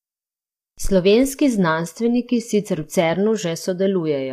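From start to finish, the speech has a rough, grainy texture. Noise fills the gaps between the harmonics, and the upper band sounds thin and synthetic. The damage is plainly audible. This points to low-delay AAC compression, likely AAC-ELD of the kind used in video calls, at a rate that fits about 32 kbps. Its short frames cannot separate closely spaced pitch harmonics well. At that bitrate the encoder runs short of bits, so detail is smeared and replaced with noise.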